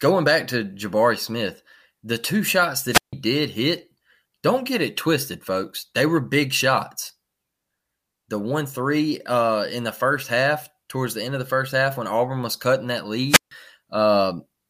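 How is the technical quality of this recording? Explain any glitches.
Two wireless microphone squelch dropouts break up this speech recording, at 2.91 to 3.13 s and 13.28 to 13.51 s. Each time the analogue FM radio link fades, a short swell of hiss comes up, then the receiver's squelch mutes the output for about 150 ms. A waveform shows a flat gap with a fuzzy noise edge, and a spectrogram shows broadband static, then a blank column.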